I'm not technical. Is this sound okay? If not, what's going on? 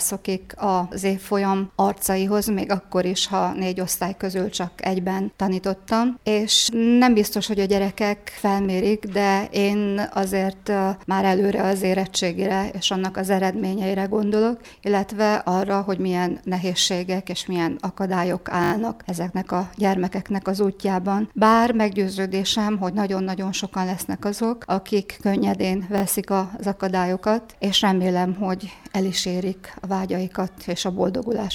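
No. A repeated buffer fault stutters at 18.64–18.72 s and 25.98–26.02 s, where a tiny 20 ms slice replays. Unlike a dropout, there's no silent gap.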